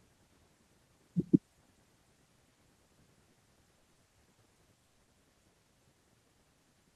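Short concealed packet loss first appears at 2.49–2.57 s, then at 2.87–2.91 s and 3.31–3.37 s. Each lost 20 to 40 ms stretch was patched by extending the preceding sound, giving a brief smear or wobble rather than an audible hole, unlike a clean dropout.

From 3.79 to 4.37 s, repeated packet loss (robotic sound) sets in. Four gaps totalling 140 ms, the longest 60 ms, cover about a quarter of the span. Because the patches follow each other closely, the concealment becomes choppy rather than a single isolated blip.

At 4.87–4.99 s a burst of packet loss removes 100 ms at once. The continued sound is faded down until the gap is effectively silent, and the audio resumes further on with that piece missing. This is longer and emptier than the brief patches.

A final short concealed loss follows at 5.05–5.09 s.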